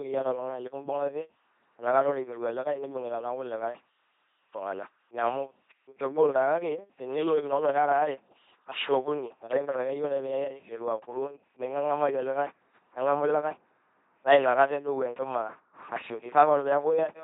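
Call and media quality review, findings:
Throughout: buzzy, mechanical robot quality, harsh buzz or hiss where voicing is misjudged, no content above 3.8 kHz. Fits an LPC-10 vocoder at 2.4 kbit/s, pulse-or-noise excitation.

11.29 to 16.33 s: further dulled, muffled. De-emphasis applied wrongly: unneeded treble cut sloping down, about 14 dB at 10 kHz relative to 1 kHz.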